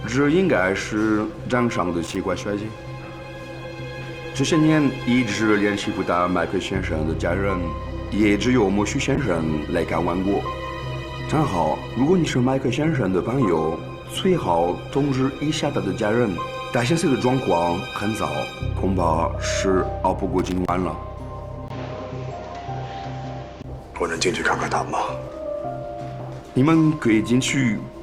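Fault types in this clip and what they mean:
Loose connector crackle: A worn or dirty contact flickering between connected and not, so the signal gets chopped up and you hear a scratchy, irregular burst. There are two of them: a short one at 2.04 to 2.16 s, and a longer one at 20.39 to 20.69 s lasting about 0.3 s. Both are brief crackly bursts that sit on top of the sound and stop as suddenly as they start.
Call bitrate drop: The encoder is being starved of bits, so it codes everything more coarsely. From 9.16 s the audio gets rougher and loses detail, and it stays degraded until about 17.25 s. The worst stretch lasts roughly 5.5 s. The change in quality fits a fall from something like 64 kbps down to around 18 kbps, with the sound recovering once the rate climbs back.
Input switched to a poorer device: This is the likely cause of the sudden change in character between 21.68 and 23.64 s. 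There's a tiny gap of about 20 ms at the switch, and then nothing above 7.6 kHz gets through, so it goes duller. The level shifts by roughly 5 dB, and a new noise floor appears around 30 dB under the signal. After that the original sound returns.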